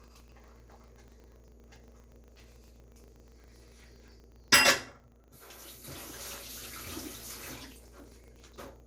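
Throughout the clip the sound is swirly, smeared and hollow, with blurred attacks. This is generation loss, likely from a few passes through MP2 at around 96 kbit/s. A steady 25 Hz buzz that rises and falls with the level also runs the whole length. It comes from a filter restarted on every block, which clears its state 25 times a second and adds a small transient at the start of each block.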